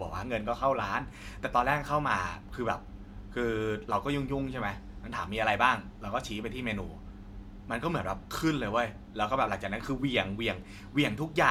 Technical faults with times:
none

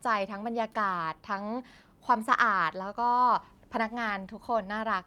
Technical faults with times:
none

